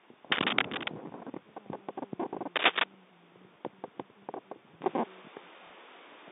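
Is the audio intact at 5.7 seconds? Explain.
No. Packet loss with the last packet repeated runs from 5.67 to 5.70 s: about 30 ms went missing, which fits a single lost packet, and replaying the previous one leaves a small blip. Since 4.82 s the sound has also been dull and boxy, with nothing above 3.8 kHz, a level shift of a few dB and a new faint noise floor, likely from the input being switched to a poorer device.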